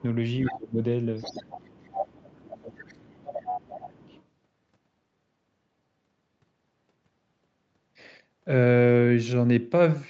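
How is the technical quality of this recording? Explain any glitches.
The speech carries call echo problems throughout its first four seconds, heard over a band that stops at 8 kHz.

Other side's voice leaking through, at 0.45–0.54, 1.18–1.84, 2.79–3.0, 3.19–3.58 and 3.97–4.23 s: a second, fainter voice appears, likely residual loudspeaker echo the canceller missed, from about 10 to 35 dB down.

Speech suppressed in double talk, at 0.5–0.8, 1.84–3.14 and 3.57–3.94 s: the talker dips sharply, by roughly 20 to 25 dB, likely as the canceller clamps down while both sides overlap.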